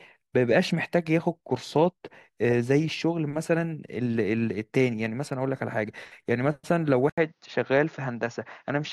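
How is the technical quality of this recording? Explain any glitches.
The recording has one clear glitch near the end. From 7.1 s to the end, after an 80 ms gap, the speech turns duller, with nothing above 6.9 kHz and a faint new noise floor, though the level stays about the same. The likely cause is an input switched to a poorer device, whose narrower band and own background noise replace the original microphone's sound.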